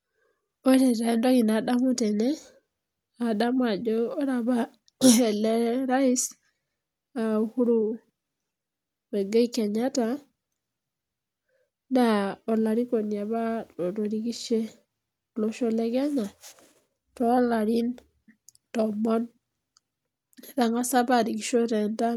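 No technical faults can be heard anywhere in the speech.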